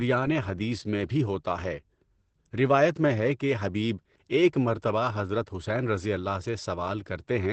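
Speech throughout carries Opus voice compression: nothing above 8.6 kHz, a hard flat ceiling on the spectrogram, and muffled, hoarse SILK coding that fits a 12 kbps wideband stream.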